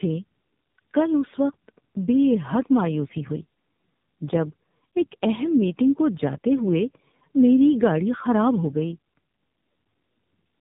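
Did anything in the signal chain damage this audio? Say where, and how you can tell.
Yes. Throughout, the speech sounds rough, muffled and warbly, with nothing above about 3.8 kHz. This is tandem speech coding: two low-rate speech codecs in a row, likely iLBC then AMR-NB, the second re-encoding the first's already degraded output, so their artefacts compound.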